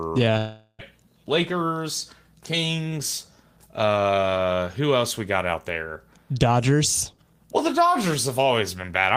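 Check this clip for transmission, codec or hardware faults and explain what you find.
One transmission fault shows up near the start of the speech.

From 0.37 to 0.82 s there is a long network dropout. Audio likely stopped arriving for 0.42 s, and that stretch is lost. The receiver extends the last sound as a fading buzz or hiss for 0.41 s, then 60 ms of silence follows before speech resumes, skipping the missing part. Unlike a brief packet-loss glitch, the fill runs long enough to decay audibly into silence.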